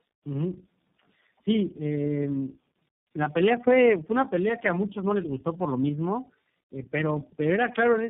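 Throughout the speech, tandem speech coding is audible: the sound points to about three low-rate speech codecs in a row, likely AMR-NB, G.729A and iLBC, each re-encoding the last one's errors. The result is rough, muffled and warbly, with nothing above 3.4 kHz.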